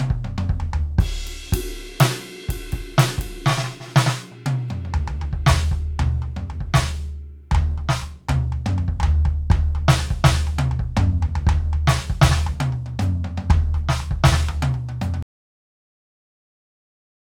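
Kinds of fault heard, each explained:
Cut-off end: At 15.23 s the music stops abruptly in the middle of a sound and falls straight to digital silence, with no decay or natural fade. That silence fills the last 2 s of the clip. The final stretch of audio was never written out or played back. The last buffers went missing before the recording or playback finished, so the music is truncated rather than brought to an ending.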